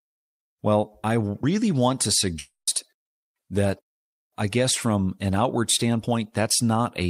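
At 2.39 s, a long network dropout likely stopped the incoming audio until 2.69 s. The receiver stretched the last speech sound into a fading buzz or hiss over 0.28 s, with 0.11 s of silence, and speech resumes with that 0.28 s gone.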